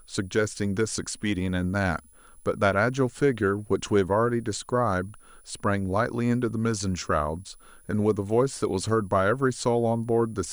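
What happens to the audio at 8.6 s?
At 8.6 s there's a switching supply whistle running under the speech, as it does all clip: a faint whine near 10 kHz, wandering between 9.8 and 10.3 kHz, roughly 35 dB down.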